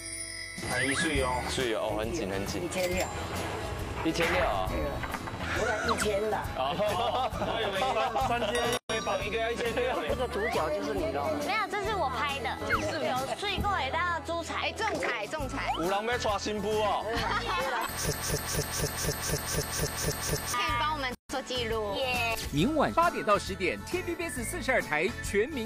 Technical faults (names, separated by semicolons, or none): gap at a join of encoded pieces; broken-record loop